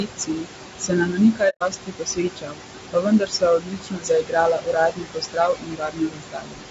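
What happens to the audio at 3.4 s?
Around 3.4 s the speech goes faint and swallowed, with soft consonants and word endings sinking into the background, down by as much as about 18 dB. This is speech cut by the noise suppressor, running from 2.93 to 4.36 s and affecting roughly a second of it in total. The suppressor mistook these quieter parts of the speech for steady noise and turned them down together with the room noise.

The background is also pumping here, dropping in the gaps and coming back up under the speech. These are noise suppressor artifacts, present across the whole clip. The suppressor attenuates, frame by frame, the frequency bands it judges to be noise, cutting them by about 18 dB. The room noise itself sits only about 7 dB below the speech, so there is a lot for it to remove.

The speech at this point is also rough and grainy. Noise fills the spaces between the pitch harmonics and the top band sounds dull or synthetic. 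The likely cause is low-delay AAC compression (AAC-ELD) at 32 kbps. Its short frames resolve pitch harmonics poorly and need more bits, so at this rate the coding damage is plainly audible.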